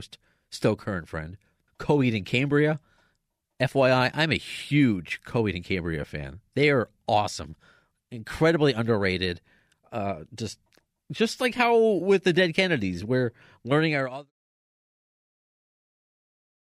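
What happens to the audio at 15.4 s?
At 15.4 s the audio is intact, with no fault to be heard at that moment.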